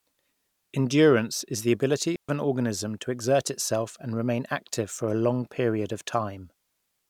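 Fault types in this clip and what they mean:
Digital wireless dropout: the receiver lost too much of the link's data and muted, leaving a clean hole of near silence about 130 ms long from 2.16 to 2.29 s, between "is the ability" and "an organism to exert", with no hiss or crackle around it, unlike an analogue dropout.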